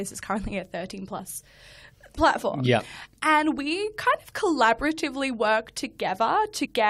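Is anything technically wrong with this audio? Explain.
Yes. Compressed frames are skipped at 1.18 s and again from 6.64 to 6.66 s. Whole coded frames never play, so the speech jumps ahead about 40 ms, then about 100 ms.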